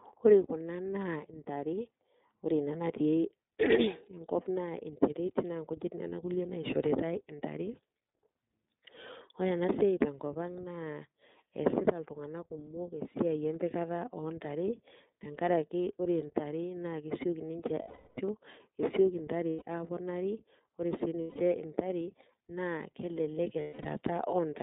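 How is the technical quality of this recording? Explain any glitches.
The speech is intelligible but plainly coloured by the iLBC codec, and it has four short dropouts near the end.

Throughout, the iLBC codec confines the sound to a telephone band of roughly 200 Hz to 3.7 kHz, and its rough, slightly synthetic texture points to the 13.33 kbps mode with 30 ms frames, each coded independently. On a spectrogram, energy stops sharply just below 4 kHz, with nothing above it and little at the very bottom.

Lost iLBC frames occur at 17.82–18.19 s (360 ms), 19.50–19.63 s (120 ms), 21.21–21.37 s (150 ms), and 23.61–23.86 s, where losses are spread over 240 ms with the longest run around 200 ms. The decoder fills each gap by repeating the last pitch cycle blended with noise, so each one sounds like a held, buzzy vowel that fades in the longest gap. The waveform shows repeated similar cycles, and the spectrogram shows flat, smeared harmonic bands. 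The speech recovers almost immediately afterwards.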